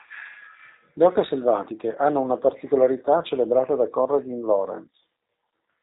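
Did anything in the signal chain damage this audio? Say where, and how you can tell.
Yes. The damage is in the codec stage: G.729 compression runs throughout, and the speech sounds rough and faintly synthetic, which fits an 8 kbit/s G.729A stream. On a spectrogram, energy stops at a flat 4 kHz ceiling, and harmonics look smeared, because each 10 ms frame is rebuilt from a vocal-tract filter, pitch predictor and a few pulses.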